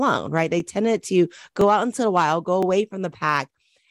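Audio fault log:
0.60, 1.61, 2.63 and 3.64 s, overlapping chunks: a brief click or tiny stutter recurs about once a second, each time a 12 ms sliver of the sound plays twice in a row. The audio was handled in 1.0 s chunks, and each new chunk began 12 ms before the previous one finished, so the end of one chunk is repeated at the start of the next. The abrupt jump back in the waveform at every join produces the regular tick.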